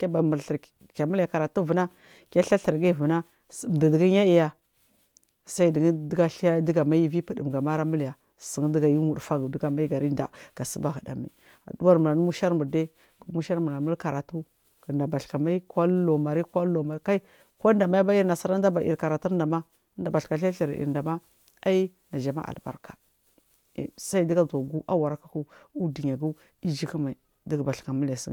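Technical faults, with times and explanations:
No technical faults are audible in this speech recording.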